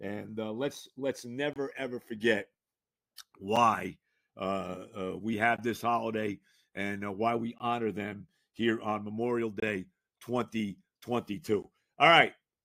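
At 1.53 to 1.56 s, between "uh let's let's" and "ever forget", the speech drops into a hard-edged hole of silence. The same thing recurs at 3.56 s, 5.57 s, 7.58 s, 9.60 to 9.62 s and 11.62 s, each dropout lasting roughly 7 to 25 ms. This is a gap between stream segments. Every 2.0 s the timestamps of adjacent segments fail to meet, and the player pads the gap with silence, so the timeline stretches slightly while no audio is lost.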